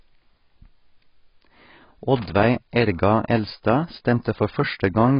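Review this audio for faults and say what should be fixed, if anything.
Throughout the speech, nothing sounds above 5.1 kHz and the texture is smeared and warbly. It is likely heavy AAC compression, fitting about 16 kbps, unlike plain low-pass filtering, which leaves no swirl. Encode at a higher bitrate.

From 2.16 to 2.44 s, an irregular burst of scratchy crackle is loose connector crackle, a contact making and breaking. Unlike clipping, it tracks handling, not loudness. Reseat or replace the cable.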